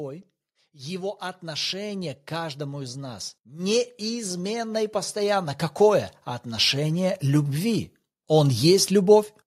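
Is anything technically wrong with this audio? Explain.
Yes. Automatic gain rising from 0.49 to 6.95 s: the gain control judged the input too quiet and slowly raised it by about 12 dB, so speech and background swell together.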